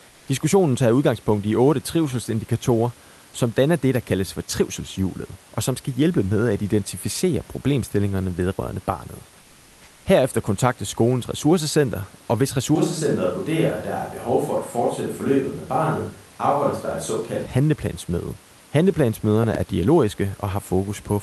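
Speech recorded over a call path that runs Opus, with the top end stopping around 12 kHz, which fits a mid-rate setting near 40 kbps. Right at the start, 0.09 to 0.27 s, the background is swapped for comfort noise for about 180 ms: a flat, featureless hiss roughly 33 dB under the loud parts and about 1 dB quieter than the real room sound around it. It happens again for about 640 ms from 9.41 to 10.05 s, just after "identificere problemstillingerne vedrørende barnet", this time about 2 dB down. That's likely Opus DTX, where the sender goes quiet during pauses and the receiver fills in synthetic noise shaped like the background. From 12.76 to 17.46 s, right after "skolens ressourcecenter og hvis", there's an abrupt switch to a distant microphone. The voice goes hollow and roomy with thinner bass, drops around 5 dB, and the room noise sits about 35 dB below the speech. Then it snaps back. 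Most likely the close mic dropped out and a camera or room mic took over. Finally there's a loud pop, actually two in quick succession, between 19.44 and 19.57 s, peaking roughly 10 dB above the signal while the speech carries on underneath. That's likely a voltage spike from a plug, switch, static or a driver hiccup.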